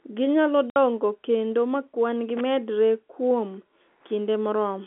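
A telephone-band speech recording carries two faults. At 0.70 s the sound drops into a dead gap lasting 60 ms, with hard edges; this is packet loss filled with silence, where the receiver played nothing for the missing data, and the length fits three lost 20 ms packets. From 2.29 to 2.41 s an irregular scratchy crackle breaks through, the signature of a loose connector crackle: a worn or dirty contact briefly making and breaking, chopping the signal.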